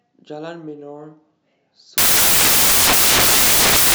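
From 1.98 s to the end, the speech collapses into loud, harsh broadband noise: samples built from the wrong bytes. Each sample's bytes are misassembled, so the rapidly varying low bits dominate. Unlike added background hiss, this noise is built from the signal itself.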